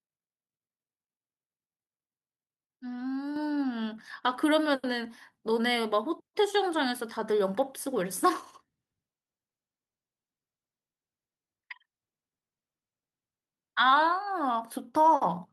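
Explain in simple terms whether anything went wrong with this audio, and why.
At 3.36 s the whole recording suddenly gets louder, the voice and the background noise together, in a single jump. That is a microphone volume step-up: the call software decided the microphone was too quiet and raised its input volume all at once instead of gradually, so everything it picks up lands noticeably louder from that instant on. The call connection itself carries the sound normally, with its very highest tones trimmed above about 12 kHz.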